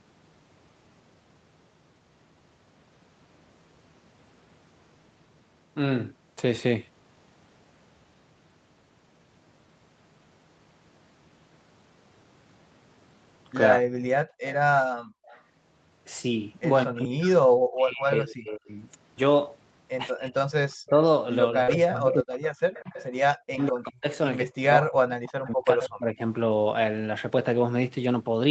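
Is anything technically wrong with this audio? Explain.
Yes, there are several faults, mostly clustered in the second half, where both sides of the call overlap.

Speech suppressed in double talk occurs at 13.77–13.9 s, 16.85–18.7 s and 20.12–26.2 s. The likely cause is the echo canceller failing to separate the near talker from loudspeaker echo while both spoke, so it attenuated everything. The talker dips or breaks up by roughly 40 dB. On the waveform, the envelope shows sudden notches. On the spectrogram, the harmonics fade or go blank in patches.

Background gated by the echo canceller occurs from 14.25 to 15.26 s. During loudspeaker playback, the canceller clamped the microphone down by about 40 dB, for roughly 0.4 s in total. The room tone drops out and then returns. The spectrogram shows the noise floor vanishing into dark gaps, and the waveform shows flat stretches between the speech.

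Echo leak occurs at 14.46–15.42 s, 20.71–23.67 s and 25.23–25.32 s. Residual loudspeaker pickup was likely sent back, producing a copy delayed by 191 ms. It sits about 20 dB, 10 dB and 30 dB below the speech, respectively. The spectrogram shows duplicated harmonic patterns trailing the originals by that offset.

Short concealed packet loss occurs at 21.63–21.70 s. About 40 ms of audio arrived too late, and the decoder extrapolated roughly 43 ms from the preceding sound before crossfading back into the real audio. It is heard as a brief smear or wobble. On the spectrogram, the harmonics stretch unnaturally flat, then blend back into the normal pattern.

Lost packet rebuilt from error correction occurs from 21.68 to 21.74 s. About 40 ms, which fits two lost packets, was rebuilt from Opus's low-bitrate in-band copies. The result sounds rougher and noisier, with no gap in the audio. The spectrogram shows smudged, grainier texture, still band-limited at 8 kHz, like the rest of the call.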